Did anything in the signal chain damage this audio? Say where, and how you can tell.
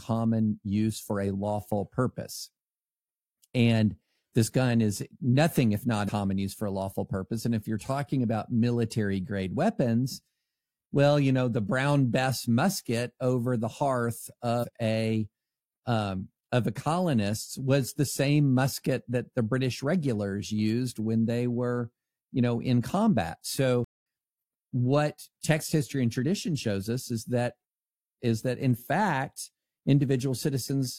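Yes. The compressed stream carries damaged data, a fault at the codec or storage stage. At 6.04 to 6.09 s, right after "gun is nothing if", there is a short glitch, and the sound resumes at "use for a lawful". At 14.59 to 14.65 s, after "musket over the hearth", a second brief blip cuts in before "a um of the". The decoder hit corrupted frames, lost sync and jumped to the next valid frame header.

A playback stall follows at 23.84 s, just after "you know in combat". The output goes silent for about 218 ms, then resumes. This is a stop in mid-flow, not a natural pause, since the speech is cut off. The likely cause is the player running out of buffered data, or its output thread being blocked, so nothing reached the output until it recovered.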